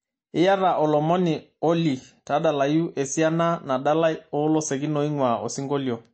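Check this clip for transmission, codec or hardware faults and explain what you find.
One codec fault runs through the whole speech clip. It is likely MP3 compression. Nothing is present above 8.4 kHz, and the damage is plainly audible. The encoder lacked bits, so it cut the treble and dropped weak frequency lines frame by frame. That leaves a dull, watery sound, which fits a low bitrate around 34 kbps.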